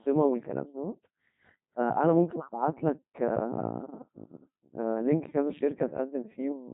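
From start to finish the speech sounds robotic and buzzy, with a thin, synthetic quality and nothing above about 3.8 kHz. This is the Codec 2 vocoder, and the damage is heavy. Instead of keeping the waveform, the decoder rebuilds the voice from sine waves using only pitch, voicing, energy and a coarse spectral envelope. The harsh, mechanical tone fits a very low rate of around 2.4 kbit/s.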